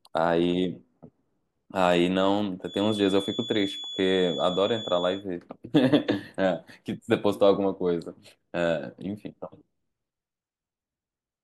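A speech clip with a feedback whistle from 2.61 to 5.26 seconds. A thin, steady tone near 3.4 kHz sits well below the speech and swells and fades slowly in level. The likely cause is a loudspeaker-to-microphone loop held just at the edge of feedback.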